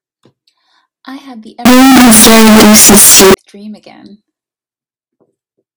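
Speech, with a burst of severe, very loud harsh distortion from 1.65 to 3.34 s, where even the quieter stretches come through at full level. The likely cause is signed and unsigned samples mixed up, which fits 16-bit data read with the wrong sign convention. With the top bit inverted, every zero crossing turns into a full-scale jump, so the speech comes through as harsh, clipped-sounding distortion.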